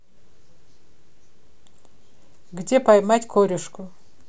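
No technical faults can be heard anywhere in this speech recording.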